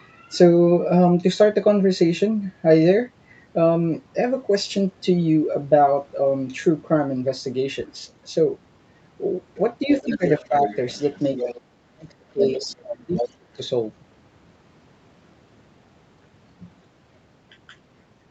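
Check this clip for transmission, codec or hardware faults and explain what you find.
Two faults show up in this speech, both between roughly 10 and 14 seconds.

Speech suppressed in double talk: the talker dips at 9.86–10.23 s, 10.48–10.69 s and 11.43–11.48 s by about 5–10 dB, then nearly vanishes at 11.7–13.59 s, about 35 dB down. The likely cause is an echo canceller muting both voices during overlap. Unlike packet loss, it fades rather than clicking.

Other side's voice leaking through: a second voice sits under the talker at 10.0–11.61 s, 12.4–12.73 s, 12.92–12.96 s and 13.16–13.28 s, about 5–15 dB below the speech. It is likely loudspeaker echo the canceller left in the microphone signal. It is a distinct, delayed voice, unlike room reverberation.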